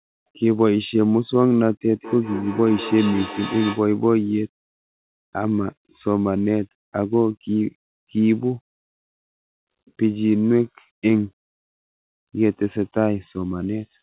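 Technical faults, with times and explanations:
1.94–3.98 s, feedback echo between two devices: speech returns roughly every fifth of a second, peaking about 12 dB below the direct voice, as a second device's playback re-enters this microphone uncancelled.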